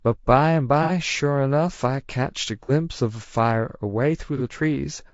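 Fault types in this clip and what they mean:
Low-delay AAC compression: The speech sounds rough and grainy throughout, likely from AAC-ELD coding at a rate near 32 kbps. Its short frames blur the pitch harmonics, so a spectrogram shows smeared harmonic lines, noise filling the gaps between them, and a thin, synthetic-looking upper band.
AAC frame loss with concealment: Brief smeared, noisy patches appear at 0.83–0.91 s, 2.63–2.71 s and 4.37–4.42 s, where the decoder rebuilt missing audio from the previous spectrum. Each gap fits one or two lost frames. The spectrogram shows blurred, frozen-looking texture, and the waveform shows disturbed envelopes.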